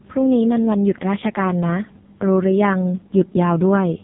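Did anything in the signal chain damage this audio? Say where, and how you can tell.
Yes. The damage is at the codec stage: an AMR narrowband mobile codec, throughout the speech. Nothing passes above about 3.8 kHz, and heavy buzzy, synthetic coloration from the vocal-tract model suggests very few bits per 20 ms frame, which fits AMR-NB's lowest 4.75 kbps mode.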